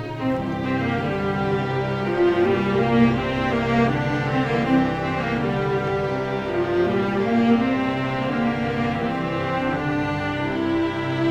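No technical faults are audible.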